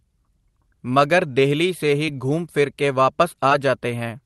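Speech packets arrived too late twice, a short concealed packet loss each time, and the receiver bridged them by extending the preceding sound. This gives a brief smear between "ਮਗਰ ਦੇਹਲੀ ਸੇ" and "ਘੂਮ ਫਿਰ ਕੇ" at 2.06 to 2.09 s, and a brief wobble just after "ਘੂਮ ਫਿਰ ਕੇ" at 3.50 s.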